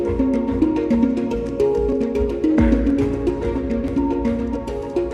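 Quick skips at 0.95, 1.93, 2.90 and 3.88 s, each dropping a tiny sliver, are audio missing between chunks, likely from processing in 1.0 s blocks.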